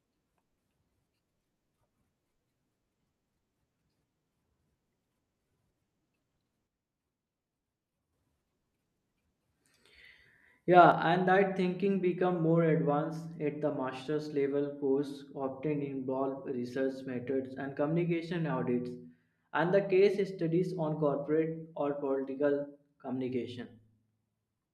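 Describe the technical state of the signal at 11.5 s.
At 11.5 s the speech sits inside a level step that begins at 10.92 s and runs to the end: it drops abruptly by about 6 dB and stays down. This is likely one channel dropping out, so the mono sum carries only one side's share of the shared signal.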